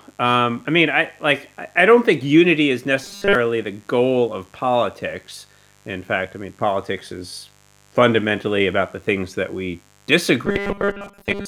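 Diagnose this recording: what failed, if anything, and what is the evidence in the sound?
A steady, raspy buzz sits under the speech for the whole clip, about 35 dB below it, built on a 50 Hz mains fundamental. This is mains buzz in the analogue wiring: a dimmer, rectifier or poor shielding is injecting sharp spikes twice per cycle, spraying harmonics well up into the kHz range.

From 3.04 to 3.35 s, between "don't think unity is" and "the goal of politics", and again from 10.46 s to the end, the speech turns into a rigid, metallic 200 Hz buzz. This is robotic sound from repeated short buffers, likely at the driver or buffer stage: audio arrived too seldom, so a 5 ms chunk was looped to fill the gap, with most of the real audio skipped.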